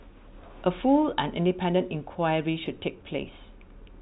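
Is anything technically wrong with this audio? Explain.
No, nothing is technically wrong with this audio.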